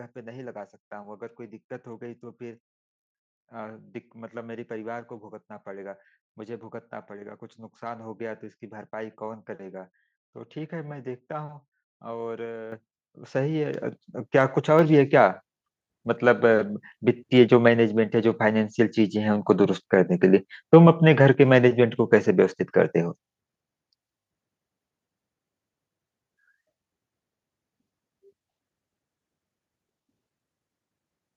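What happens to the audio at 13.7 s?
At 13.74 s the microphone volume is stepped up: the call software raises the device's input gain in one jump of about 5 dB, so the speech and background noise get louder together. The waveform envelope widens abruptly there, and the spectrogram brightens evenly across all frequencies.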